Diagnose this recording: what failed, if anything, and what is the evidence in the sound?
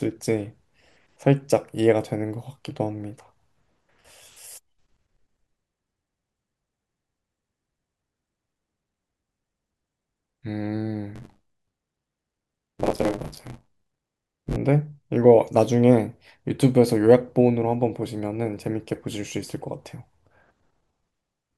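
Buffer tearing in the driver/buffer stage, 11.15 to 14.57 s: a robotic 93.8 Hz buzz over the speech, fitting a 512-sample buffer. Writer and reader have slipped, so about two-fifths of each period replays audio around 30 ms old. Spectrogram: regular vertical striations. Waveform: hard steps at each join.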